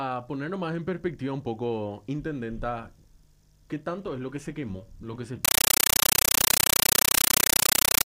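From 5.45 s to the end at 8.06 s, the sound is replaced by a compressed stream played as audio. Loud static chatters at a steady 31.25 Hz, each 9.33 ms noise burst followed by silence, which fits an undecoded AC-3 (Dolby Digital) stream. That regular burst-and-gap rhythm distinguishes it from plain digital noise or dropouts.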